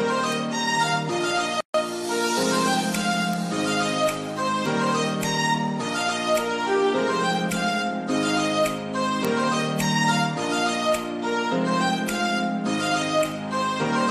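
At 0.32 s a single sharp tick cuts through, bright and broadband, with no relation to the surrounding sound. This is a bit error spike: one sample had a bit flipped in memory or on a digital link, so its value leapt by a power of two and snapped straight back on the next sample, producing an isolated click rather than any lasting change.

At 1.61 s the sound drops into silence for about 138 ms, then resumes at 1.74 s exactly where it left off. This is a gap at a join of encoded pieces. The material was encoded as separate segments and spliced without trimming, so the start-up delay of one encoder run and the padded final frame of the other both remain as dead air. The codec smears the edges, so the truly silent stretch is shorter than the full gap.

The same kind of bit error spike returns at 3.33 s and again at 9.25 s, each a lone one-sample tick with the same hard, full-spectrum character as the first.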